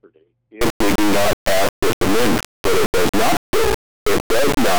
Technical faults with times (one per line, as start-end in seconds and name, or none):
0.61-4.78 integer read as float